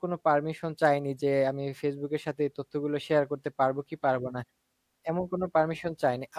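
No dropouts, distortion or other technical faults can be heard anywhere in the speech.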